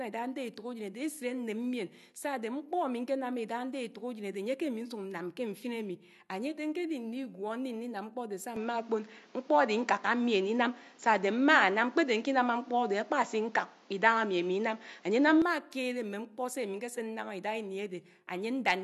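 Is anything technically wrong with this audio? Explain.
Yes. From 8.56 s to 15.42 s the speech suddenly turns duller, with nothing left above 7.6 kHz. The level shifts by around 5 dB, and a new background noise sits roughly 35 dB under the voice. The change happens with no gap, and the fuller sound returns at 15.42 s. This is likely an input switched to a poorer device mid-recording: a second microphone or headset path with a narrower band, its own gain and its own noise floor.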